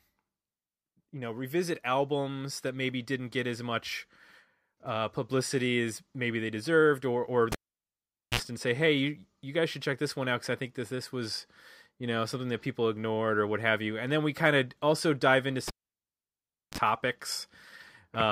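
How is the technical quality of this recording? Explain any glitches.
The recording is marred by two cable pulled and plugged in events. The first runs from 7.52 to 8.40 s, the second from 15.68 to 16.78 s. Each starts with a pop as the live lead comes out. The speech then drops to near silence, for about 0.82 s and then 1.05 s. As the plug goes back, only its tip touches first, picking up mains hum. That buzz lasts 51 ms at 60 Hz, then 38 ms at 50 Hz. A second pop marks the return of sound.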